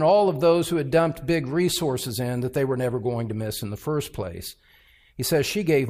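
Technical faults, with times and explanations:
No technical faults can be heard in this audio.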